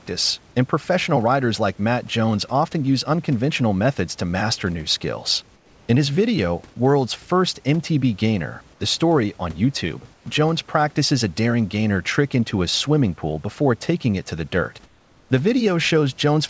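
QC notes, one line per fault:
5.56–5.88 s, 10.14–10.26 s and 14.86–15.30 s: comfort noise in place of the background. In the pauses after "to master new skills", at 10.14 s, and after "it to the dirt", the room noise (about 35 dB below the speech) gives way to a flat, textureless hiss about 3 to 4 dB quieter for 320, 120 and 440 ms, then the real background returns with the sound. This is likely discontinuous transmission: the sender stopped during silence and the receiver synthesised a noise fill shaped roughly like the background.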